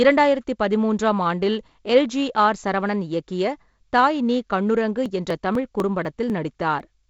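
Periodic USB or driver dropouts run from 5.06 to 6.80 s, about seven of them spaced every 0.25 s. Each time, something stalls the USB transfer or the audio driver on a fixed schedule, and roughly a millisecond of samples is skipped outright rather than padded with silence, so the waveform jumps and each gap sounds as a small, evenly timed tick over the speech. The tight wideband sound of G.722 coding, with nothing above about 7.7 kHz, carries on through the ticks.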